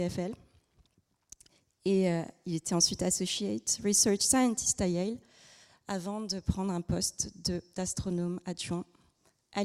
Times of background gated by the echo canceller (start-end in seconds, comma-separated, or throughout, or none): none